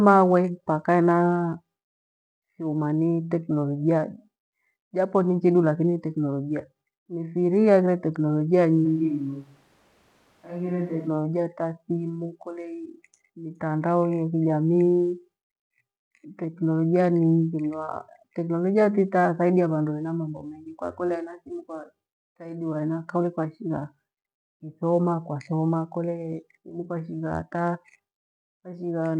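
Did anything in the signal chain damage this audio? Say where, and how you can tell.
Yes, at capture. From 8.87 to 11.07 s, between "aghire tekinolojia" and "ta thimu", the speech abruptly turns roomy, hollow and thin at about the same level, with room noise roughly 35 dB down, then snaps back. That's likely a switch to a distant microphone.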